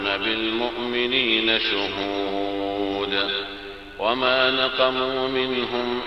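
A steady, raspy mains buzz runs throughout. Switching spikes from 50 Hz power add harmonics up to several kHz, sitting roughly 35 dB below the sound.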